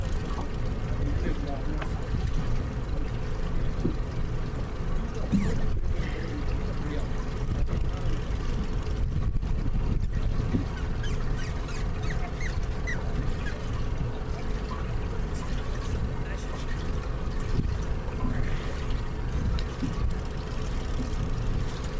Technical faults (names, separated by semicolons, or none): none